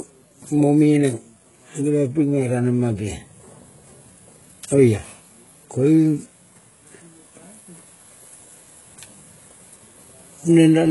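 From start to finish the speech carries heavy HE-AAC compression damage, likely from a bitrate near 12 kbps. Treble above 11.4 kHz is absent, and what sits below it is rebuilt, sounding gritty and metallic on s sounds.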